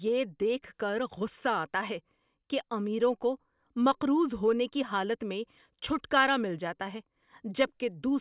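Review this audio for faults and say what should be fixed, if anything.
Nothing here needs fixing; I didn't hear any technical faults anywhere in the recording, so it can stay as it is.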